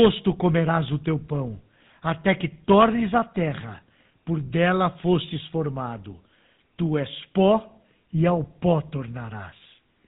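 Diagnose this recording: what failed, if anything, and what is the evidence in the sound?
The failure is at the codec stage: GSM full-rate coding throughout the speech gives a plainly buzzy, gravelly roughness. The coder models the vocal tract and drives it with coarse, regularly spaced pulses, which fits a 13 kbps rate. A spectrogram would show nothing above 4 kHz.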